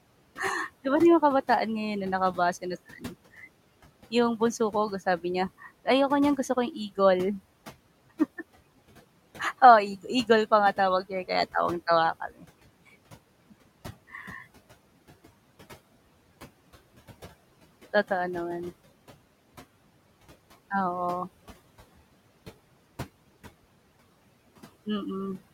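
Noise suppressor artifacts run through the whole speech recording. The suppressor pushes the room noise, which sits about 20 dB below the speech, down by about 17 dB between phrases and lets it back under the talking. On a spectrogram the noise floor flickers frame by frame, with isolated specks of residue.

Speech cut by the noise suppressor occurs at 2.98 to 3.15 s and at 12.2 to 12.45 s. The suppressor mistook quiet speech for noise and pulled it down by about 13 dB and about 14 dB, so roughly 150 ms and 100 ms sound swallowed. The waveform envelope dips abruptly, and the spectrogram shows faint harmonics vanishing.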